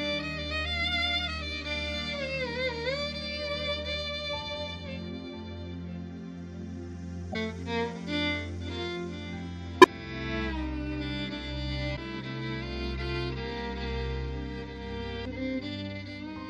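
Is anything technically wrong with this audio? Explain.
Yes. Damaged data in a compressed stream causes three brief glitches, at 7.30–7.36 s, 9.81–9.87 s and 11.93–11.98 s, each about 56 ms long. Corrupted bytes made the decoder misread frames and lose sync until it found the next frame header, producing each glitch.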